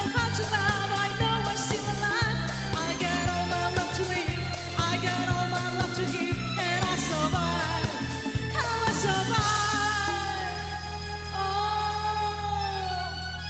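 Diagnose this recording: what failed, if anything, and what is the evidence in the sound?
Nothing failed in this recording, and the sound holds no evidence of a fault; the call's microphone processing and codec path simply leave nothing above about 8 kHz, which is normal for this chain.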